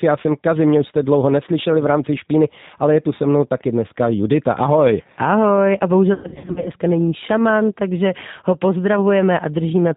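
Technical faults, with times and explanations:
Throughout: G.729 codec. The whole clip has passed through a G.729A-type coder at 8 kbit/s, and the damage is plainly audible. Each 10 ms frame is rebuilt from a vocal tract filter, a pitch predictor and a handful of sparse pulses, so the speech keeps its intelligibility but takes on a rough, synthetic edge. The band stops at 4 kHz, which removes sibilance and air and leaves the sound muffled and narrow.
6.14 to 6.70 s: VoIP packet loss concealed by the speech codec. Over roughly half a second, packets drop out in scattered gaps, about 340 ms missing in total, with the longest unbroken hole near 100 ms. In each gap the decoder repeats its last pitch and filter at falling gain, so the speech smears into a buzzy tone or coloured noise that fades. Because every frame builds on the one before, the sound stays weak and distorted briefly after packets resume.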